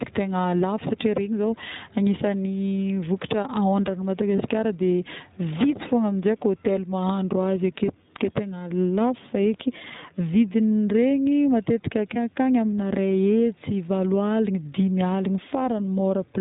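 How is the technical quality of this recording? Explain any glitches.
The recording is narrowband and audibly processed throughout, with two brief dropouts in the speech.

The whole clip has a band-limited, slightly rough and synthetic quality, with nothing audible above 4 kHz. This is the iLBC codec, a narrowband VoIP coder that models each short frame's excitation on its own rather than building on the previous one. The damage is plainly audible, and the texture fits iLBC's 15.2 kbps mode with 20 ms frames.

At 4.36 to 4.39 s and again at 12.14 to 12.18 s, the speech briefly turns into a held, faintly buzzy smear before it snaps back. These are lost iLBC frames, each consistent with roughly one 20 ms frame going missing. The decoder fills the hole by repeating the last pitch cycle blended with noise. Because each iLBC frame decodes independently, the voice recovers almost immediately.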